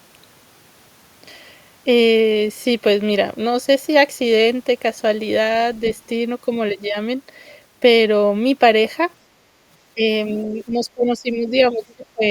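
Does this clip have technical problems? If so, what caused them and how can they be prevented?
Yes. Between 9.94 and 10.07 s, 10.66 and 11.51 s, and 11.71 and 12.2 s the speech dips and breaks up, falling by roughly 10 to 20 dB at its deepest. This is likely speech suppressed in double talk: with both sides talking at once, the echo canceller could not tell the local voice from loudspeaker echo and turned everything down. A canceller with better double-talk detection, or a headset, would prevent it.

Brief, faint scraps of another voice appear at 11.89 to 11.94 s and 12.24 to 12.28 s, around 30 to 35 dB below the speech. This is likely the other side's voice leaking through: the loudspeaker's playback reached the microphone and the echo canceller left residue. Headphones or a stronger echo canceller with residual suppression would stop it.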